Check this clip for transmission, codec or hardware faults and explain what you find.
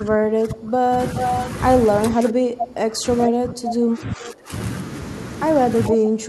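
Two faults recur through this speech: speech suppressed in double talk, and echo leak.

Speech suppressed in double talk, at 0.0–0.99 s, 2.1–3.06 s, 3.27–4.52 s and 5.89 s to the end: the voice dips by up to about 20 dB. This is likely an echo canceller ducking the talker while both sides speak.

Echo leak, at 1.17–1.48 s, 2.6–2.65 s, 3.22–3.27 s and 5.86–5.93 s: brief repeats trail the voice by about 430 ms, some 5 to 10 dB quieter. A loudspeaker's sound was likely not fully cancelled and was sent back.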